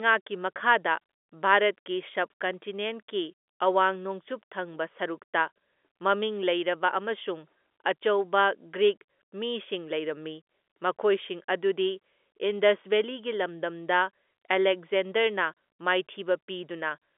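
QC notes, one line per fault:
No faults are heard in the speech. The G.711 telephone coding holds it to a line band of about 250 Hz to 3.5 kHz, with nothing above 3.8 kHz.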